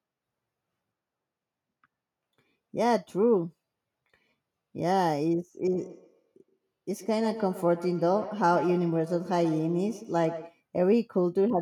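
Speech, with a feedback echo between two devices from 5.67 to 10.59 s: a second device in the room replays the call, the first mic grabs it again, and each word returns roughly every tenth of a second, thinner and ringier, peaking about 14 dB under the speech.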